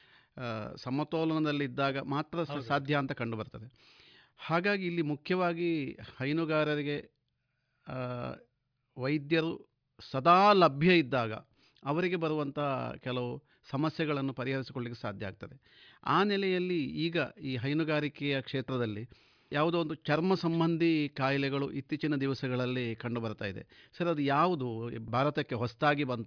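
Speech recording. No technical fault can be heard anywhere in it.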